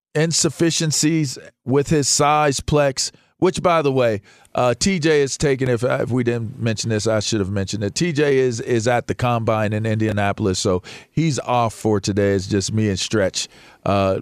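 At 5.66 to 5.69 s, just after "is taking", a single sharp pop stands a few decibels above the speech, likely a voltage spike from a plug, switch or static discharge. At 10.09 to 10.12 s, between "at the combine in" and "so he's off for", a brief jumbled moment occurs where a 10 ms chunk of audio plays two chunks late, so the chunks are out of order.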